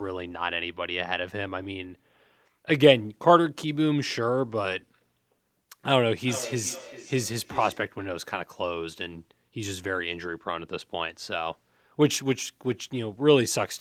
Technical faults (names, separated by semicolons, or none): feedback echo between two devices